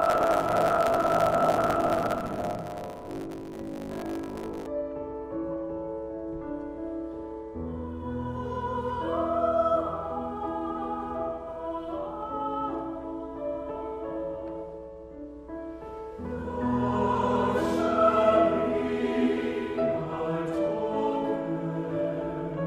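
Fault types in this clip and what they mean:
Buffer tearing: writer and reader have slipped, so about half of each period replays audio from a lap earlier, giving a 50 Hz robotic rattle for the first 4.7 s.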